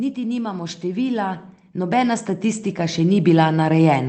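From 0.15 s to the end, automatic gain rising: the gain control keeps lifting level, so voice and background noise swell together, unlike a speaker moving closer, where the background stays put.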